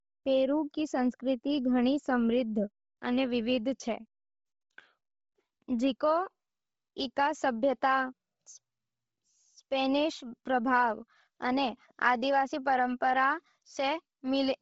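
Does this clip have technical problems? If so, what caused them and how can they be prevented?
Yes. Throughout the speech the sound is breathy and grainy, with a hissy, noise-like texture where the upper detail should be, and nothing above 7.7 kHz. The likely cause is heavy Bluetooth LC3 compression. The codec discards most of the upper spectrum and fills the gaps with noise, and the damage fits a low bitrate around 24 kbps with 7.5 ms frames. To prevent it, raise the LC3 bitrate or record over a wired connection.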